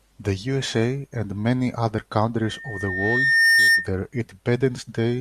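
At 2.42 s, just after "and many other", a loudspeaker feedback squeal begins: the microphone is picking up its own loudspeaker, and at 1.8 kHz the loop gain tops unity, so that tone feeds on itself. It swells over about a second into a piercing whistle roughly 10 dB above the speech, ending at 3.91 s. A spectrogram shows a thin horizontal line at 1.8 kHz brightening steadily, and the waveform's envelope balloons across that span.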